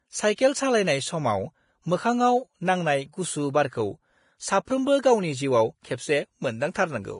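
Heavy lossy coding, likely Vorbis compression at a low bitrate of around 30 kbps, runs through the whole speech clip. The treble is quantised so coarsely that detail turns to hiss and grain, and nothing survives above 10.6 kHz, so the sound is dull, rough and noisy on sibilants.

Twice the codec spreads its quantisation noise back across a transform block ahead of a sharp onset, causing pre-echo. A short hiss runs for 27 ms from 0.35 s and for 24 ms from 4.65 s, softening and smearing the attacks that follow.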